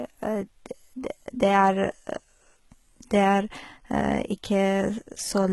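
HE-AAC compression runs throughout the speech, likely the cause of the rough, smeared treble. Only the lower spectrum sounds genuinely coded, with the top rebuilt from copied lower bands and nothing above 11.8 kHz. The s sounds turn gritty and metallic, and the heavy damage fits a bitrate near 16 kbps.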